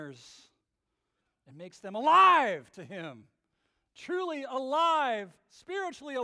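No technical faults can be heard anywhere in this speech recording.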